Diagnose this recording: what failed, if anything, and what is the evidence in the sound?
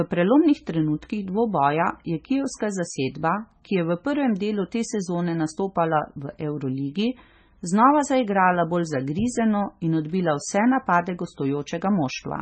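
Codec stage, likely heavy MP3 compression: watery, swirly speech throughout; a spectrogram shows a flat 8.4 kHz ceiling and flickering gaps where weak lines drop out.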